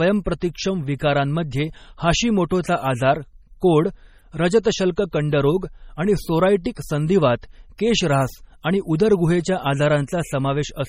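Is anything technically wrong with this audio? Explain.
Yes. Throughout the speech there is a watery, swirling quality, with metallic chirps on s sounds and softened consonant attacks, and nothing is heard above 16.6 kHz. This heavy damage is likely MP3 compression at a low bitrate, around 32 kbps. Short of bits, the encoder cuts the treble at a fixed frequency and drops weak frequency lines, which flicker on and off from frame to frame and produce the swirl.

At 4.63 s a brief hiss of about 19 ms comes just before a sharp onset, and the attack itself sounds smeared. This is pre-echo. The codec spreads its quantisation noise evenly across a whole block, so when a sudden attack lands late in that block, noise sized for the loud part also fills the quiet moment ahead of it.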